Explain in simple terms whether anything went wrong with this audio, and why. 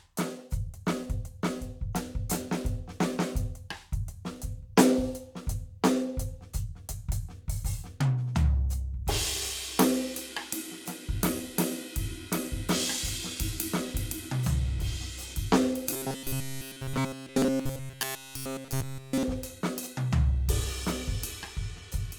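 Robotic sound from repeated short buffers appears from 15.91 to 19.23 s, where the music turns into a stiff, metallic buzz at 133 Hz. New audio was likely arriving too slowly, so a tiny slice, about 7.5 ms long, kept being replayed instead.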